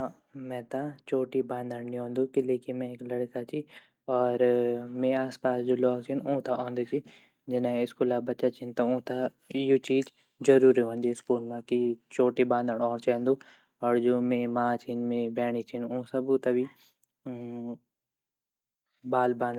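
No technical faults can be heard anywhere in this speech recording.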